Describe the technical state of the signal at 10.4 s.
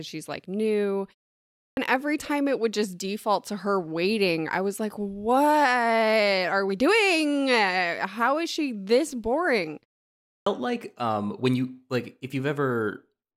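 At 10.4 s the signal is inside a clipped start after a pause, running from 10.21 to 10.46 s. After "is she this boring" comes a pause of about 0.44 s, long enough for the output to drop into an idle state, and it needs roughly a quarter of a second to wake, so about 254 ms of speech is swallowed and the next sound bursts in already underway before "like um when you". Unlike muted pauses, where only the background vanishes, speech itself is lost here.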